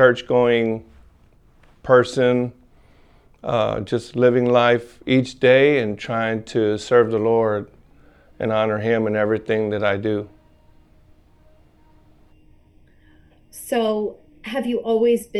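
Right at about 12.33 s the audio turns hollow and phasey, and it stays that way to the end at 15.40 s. That's channel delay (comb filtering): one channel is running late by only a fraction of a millisecond, and when the two get summed to mono, the shared content cancels at evenly spaced frequencies. The first notch sits somewhere around 1.5 kHz, which is what scoops out the body and gives it that hollow, tubey colour.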